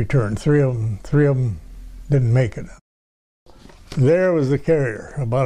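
No technical faults can be heard anywhere in the signal.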